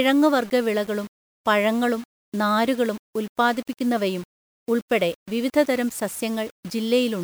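From start to finish the speech carries a grainy, gritty distortion that shifts with the signal itself, roughest on soft syllables and trailing sounds, where quiet passages break up, sputter or drop out entirely. The grit sits only about 25 dB below the speech. This is low bit depth without dither: the audio was likely rounded to just 6 bits with no dither, so the rounding error tracks the waveform instead of forming a steady hiss.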